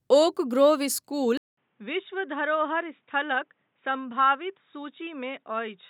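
At 1.37 s the speech drops out for 200 ms. When it returns, nothing is heard above 3.8 kHz, and this lasts to the end. The sound turns dull and boxy. It is also quieter, by roughly 10 dB. A faint new background noise sits far beneath the speech. The likely cause is an input switched to a poorer device, such as another microphone or a headset's call profile, with its own narrower band, level and noise.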